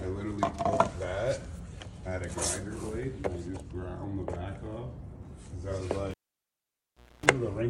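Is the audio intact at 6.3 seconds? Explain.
No. At 6.3 seconds the cable has been pulled and plugged in, across 6.11 to 7.26 s. A pop cuts the sound to near silence for about 1.1 s. A 60 Hz mains buzz lasts roughly 0.27 s while only the tip touches. Another pop brings the sound back.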